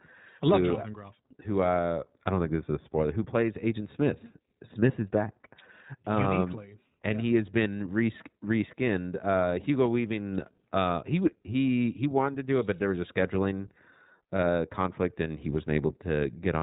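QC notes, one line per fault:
Throughout, iLBC codec: the speech is dull and band-limited, with nothing above 4 kHz, and plainly rough and synthetic. This narrowband coder encodes each 20 ms frame's excitation without relying on the previous frame, and the sound fits its 15.2 kbps mode.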